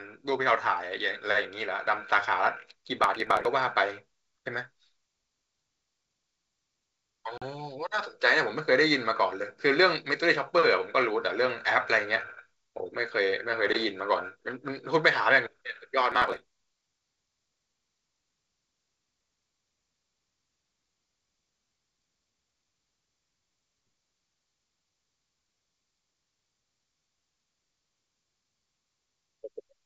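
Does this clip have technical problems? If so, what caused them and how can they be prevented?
Yes. Processor overload crackle at 3.04–3.45 s and 16.12–16.53 s: the processor repeatedly missed deadlines on what sounds like roughly 5 ms buffers, skipping each one and leaving gritty crackle. Prevent it by reducing processing load or enlarging buffers.

Packet loss on an ADPCM call at 7.38–7.43 s: a 40 ms hole, about two packets, desynchronised the decoder's predictor, so the sound resumes with brief distortion. Prevent it with packet loss concealment or redundancy.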